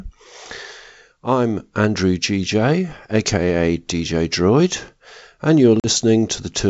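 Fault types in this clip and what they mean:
Packet loss on an ADPCM call, 5.80 to 5.87 s: about 40 ms of speech, likely a couple of packets, drops into a hard-edged silent gap. The decoder's predictor and step size lose track of the sender's, so the returning wideband G.722 speech briefly comes back mismatched before settling.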